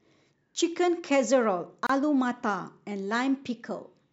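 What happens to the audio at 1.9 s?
Two separately encoded pieces of the speech were joined here without trimming, leaving a gap at a join of encoded pieces. The encoder's start-up delay and the padding on the previous piece's last frame both stayed in, so a gap of about 28 ms opens from 1.87 to 1.89 s. The speech drops out abruptly, with edges smeared by the codec, then resumes exactly where it stopped, heard as a brief hiccup.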